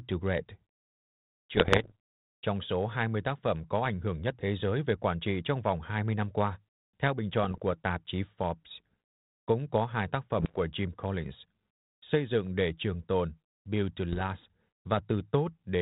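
Bit errors on an ADPCM link at 1.54–1.92 s, 7.44–7.72 s, 10.40–10.59 s and 14.13–14.21 s: up to about one bit in a hundred flips, knocking the decoder's step size and predictor off track, so pops and rough, level-jumping bursts ring through the narrowband sound.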